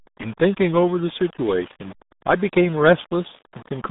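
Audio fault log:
throughout Wi-Fi interference: A steady ticking runs under the speech about ten times a second, roughly 30 dB below it. The ticks come every 102.4 ms, the spacing of a Wi-Fi beacon. A nearby radio's pulses were picked up by the audio circuitry and rectified into the signal, so each beacon transmission lands as a click.
throughout Low bit depth without dither: The speech has a gritty, grainy edge that rises and falls with the voice, roughly 25 dB below the signal. Quiet tails and soft consonants break up and sputter instead of fading smoothly. The likely cause is that the audio was rounded to very few levels without dither, which fits a depth of about 6 bits. The rounding error follows the waveform, so it sounds like distortion rather than a steady hiss.
throughout RealAudio 14.4 codec: The speech is muffled and gargly. Nothing above 3.8 kHz survives, and the usable band sits between about 150 Hz and 3.7 kHz, so sibilants lose their crispness and the voice sounds telephone-like. 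This is the RealAudio 1 speech codec at heavy damage, which fits an 8 kbit/s dial-up stream.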